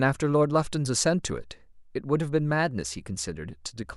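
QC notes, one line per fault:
No faults to note.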